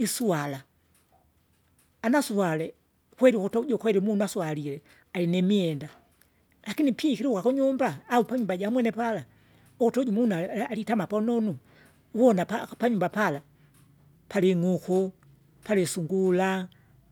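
Speech recording with no technical faults to report.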